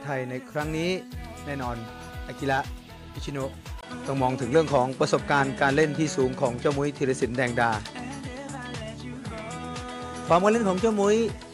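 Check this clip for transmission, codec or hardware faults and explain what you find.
At 3.81 s the sound turns duller and boxier after a 20 ms gap, and it stays that way to the end. Nothing is left above 11.4 kHz, the level shifts by about 5 dB, and a new background noise sits roughly 35 dB under the signal. This is likely an input switched to a poorer device: the recording jumped to a different microphone or headset path with a narrower band, its own coloration, gain and noise floor.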